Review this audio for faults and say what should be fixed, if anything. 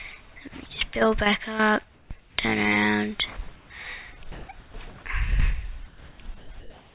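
Comfort noise in place of the background appears at 1.94–2.1, 2.2–2.38, 4.32–4.48, 5.88–6.18 and 6.6–6.94 s. The background turns flat and featureless, level-shifted by about −1 to +10 dB. This is likely discontinuous transmission, and it shows as smooth, uniform spectrogram patches.

Sound dropped by the voice detector occurs at 6.38–6.5 s, where roughly 90 ms of sound vanishes into steady noise. It appears as a blank, flat waveform stretch.

Disabling DTX, or lowering the voice-detection threshold and adding hangover time, would prevent both faults.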